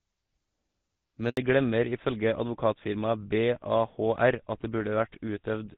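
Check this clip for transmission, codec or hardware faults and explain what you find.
Two transmission faults are audible, occurring back to back as the call changes network.

A handover gap runs from 1.29 to 1.37 s. The speech dies away and stays silent for 80 ms while the phone switches links and no speech frames arrive. Unlike a dropout from packet loss, there is exactly one clean hole, immediately followed by a change in sound quality.

A fallback to narrowband follows from 1.37 s to the end. The call leaves the AMR wideband (HD Voice) codec, heard before the gap at a clear 12.65 kbit/s with light coding damage, and drops to a narrowband GSM codec. Nothing remains above 4 kHz, so the speech turns duller and rougher. Unlike a low-rate AMR-WB mode, which stays full in band but raspy, the upper band is missing outright.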